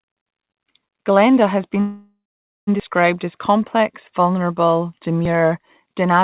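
From 1.8 to 2.69 s, a call audio freeze: the sound smears into a fading buzz, then goes silent for 490 ms, likely because delayed packets emptied the jitter buffer. The spectrogram shows a stretched band, then a blank gap.

At 2.80 s, just before "as complex vulnerable", and again at 5.25 s, just after it, there is audio missing between chunks. Roughly 40 ms is dropped, 2.5 s apart, likely at chunk boundaries. The waveform shows an abrupt splice with no silence.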